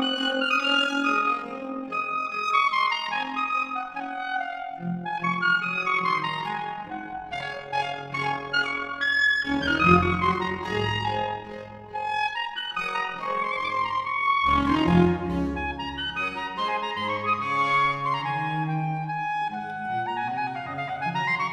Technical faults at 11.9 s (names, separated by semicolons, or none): overlap-add ripple